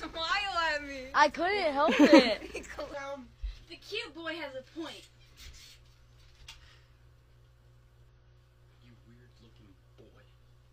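Compressed frames skipped at 1.30 to 1.35 s: the audio lurches forward, losing roughly 50 ms of material, because whole frames of the compressed stream never reach the output, either absent from the file or rejected by the decoder as corrupt. The gap is a whole number of frame lengths.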